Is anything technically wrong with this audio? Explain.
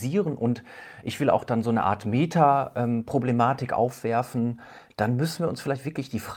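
Yes. Two related timing faults affect this speech clip.

Clock drift between sender and receiver runs through the whole recording. The sender's audio clock is running fast, by about 4 percent. Samples arrive faster than the receiver plays them out. Its jitter buffer keeps filling. The receiver must discard audio to keep the buffer from overflowing. The result is a delivery that never sits quite steady.

Repeated timing corrections occur from 0.25 s to the end at 6.37 s. These are the receiver's fixes for that surplus. It trims short pieces out of the stream, always cutting, never repeating. The edits fall at uneven intervals. Overall the speech is pushed to about 104 percent of its natural pace. Each cut is tiny. Together they make the pace slightly hurried.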